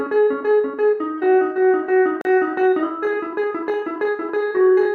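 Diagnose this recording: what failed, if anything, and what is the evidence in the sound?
A gap between stream segments at playback: sound stops dead from 2.21 to 2.25 s, with hard edges, then resumes exactly where it left off. Unlike a packet dropout, nothing is missing; mistimed segment boundaries, fitting 2-second segments, inserted about 37 ms of silence.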